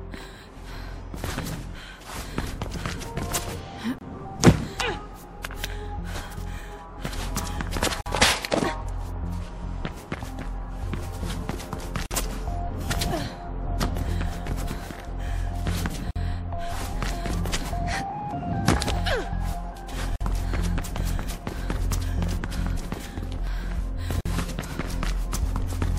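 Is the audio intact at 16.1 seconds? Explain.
No. A gap at a join of encoded pieces cuts in from 16.11 to 16.16 s. Separately encoded pieces were joined with their padding left in, leaving a gap of about 49 ms with smeared edges. It recurs every 4 s.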